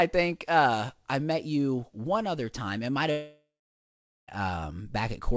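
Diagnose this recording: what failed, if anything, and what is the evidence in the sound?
The network stage failed, most likely as a long network dropout between 3.11 and 4.31 s. About 1.17 s of audio never arrived. The receiver stretched the last sound into a fading buzz or hiss, and that gave way to roughly 0.8 s of near silence before the audio resumed, with the lost part gone. On a spectrogram, the harmonics smear into flat horizontal bands, decay, and leave a blank gap. The waveform shows a shrinking envelope, then a flat line.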